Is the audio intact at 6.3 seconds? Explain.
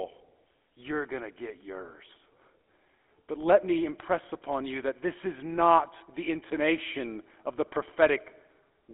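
No. At 6.3 seconds, as throughout the clip, the speech has passed through the GSM full-rate codec, which fits about 13 kbps. Its vocal-tract model and sparse pulse excitation, on a line band of 250 Hz–3.5 kHz, leave a clearly audible buzzy, gravelly roughness.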